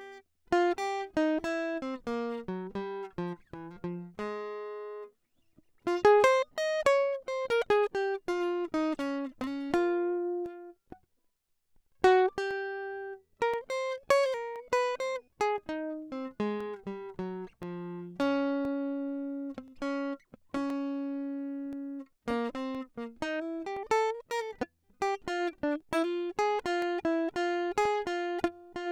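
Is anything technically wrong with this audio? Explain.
Yes. From 9.44 s to 27.86 s, periodic USB or driver dropouts occur: something blocks the audio driver or USB bus every 1.024 s, and about a millisecond of music is replaced by silence each time. Roughly twenty evenly spaced ticks result, audible against the music.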